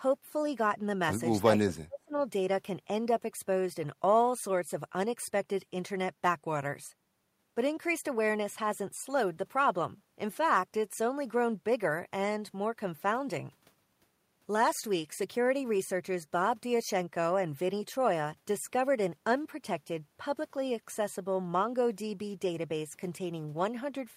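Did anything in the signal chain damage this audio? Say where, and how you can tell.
Yes. From 1.63 to 2.14 s the speech sinks sharply, by around 30 dB at its deepest, roughly 0.4 s in all. This is likely speech suppressed in double talk: the call processing's echo canceller mistook this talker for loudspeaker echo during simultaneous speech and attenuated it.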